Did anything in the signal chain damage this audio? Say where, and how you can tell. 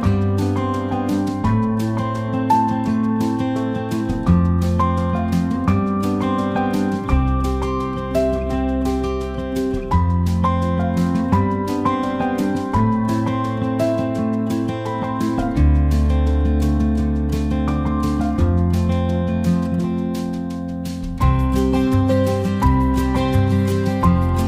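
No, nothing in the signal chain has left an audible mark on this audio. Listening across the whole clip, there is no stage whose handling can be heard in the sound.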